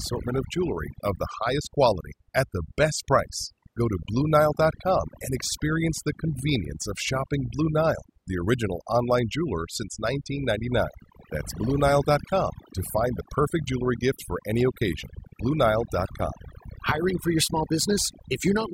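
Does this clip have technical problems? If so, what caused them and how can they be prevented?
Yes. The speech suffers from overdone noise removal throughout. A noise reducer set too aggressively has pulled down or switched off individual frequency bands whenever their level came close to its noise estimate, and the quieter parts of the voice were caught along with the noise. The background drops and breaks up into twinkling specks. To prevent it, apply gentler reduction settings and check the result against the unprocessed recording.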